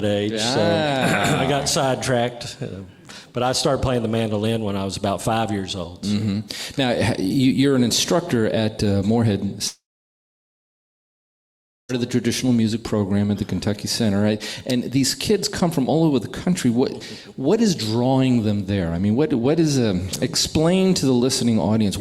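A long network dropout runs from 9.67 s to 11.91 s. At 9.67 s the audio breaks off and the last sound is stretched into a brief fading buzz or hiss, then about 2.07 s of silence follows. When the audio returns at 11.91 s, about 2.22 s of material is simply gone. This is likely a network stall: the receiver kept extending the final sound for a moment, then gave up and played nothing until data arrived again.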